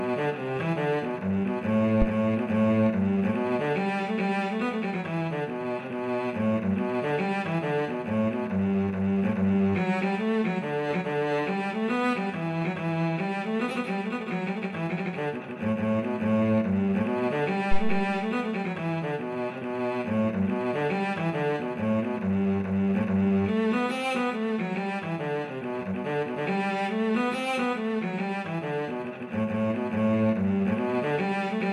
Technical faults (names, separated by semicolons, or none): phantom power thump